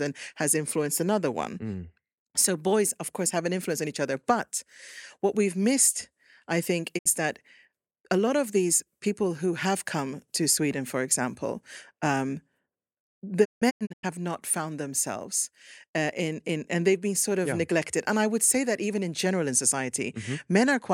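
At 6.97 s and again from 13.44 to 14.05 s the speech suffers a digital broadcast dropout. The receiver briefly mutes, with a quick fade, after frames fail. The second dropout leaves several short holes, the longest 160 ms. The sound shows silent gaps rather than warbling concealment or clicks.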